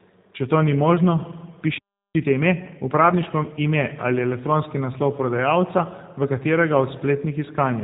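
From start to finish the speech has passed through the G.729 codec, which rebuilds each 10 ms frame from a vocal tract filter, a pitch predictor and a handful of pulses. The plainly audible damage fits an 8 kbit/s G.729A coder. Nothing survives above 3.8 kHz, so the speech sounds dull, slightly rough and synthetic.

From 2.15 to 3.59 s a time-compressed catch-up follows a stall: the player trims its backlog by removing short pieces and cross-fading the joins. The speech runs about 1.25 times fast at unchanged pitch, sounding hurried.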